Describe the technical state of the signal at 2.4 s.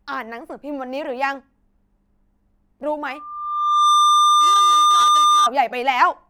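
At 2.4 s the speech signal is intact, with no dropout, clipping, distortion or other technical fault to be heard at that point.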